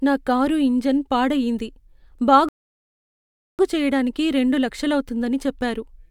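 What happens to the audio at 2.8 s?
A rebuffering stall silences the speech from 2.49 to 3.59 s while the player waits for data. It then resumes exactly where it stopped at "చెయ్యటానికి రెండు", adding 1.1 s of silence. Unlike a dropout, nothing is skipped.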